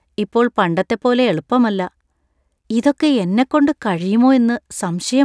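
No technical fault can be heard anywhere in the speech recording; the signal stays continuous and stable throughout.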